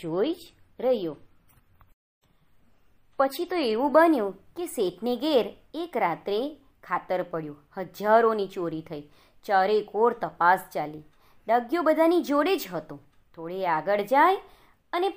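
The player began on a low-bitrate version of the adaptive stream so playback could start quickly, and switched to a better rendition once it had measured the connection. From 0.0 to 4.0 s the sound is dull, with the treble missing and codec artefacts stronger, which fits an MP3 stream at around 40 kbit/s. At 4.0 s the quality jumps up abruptly with no gap, consistent with a step to about 128 kbit/s.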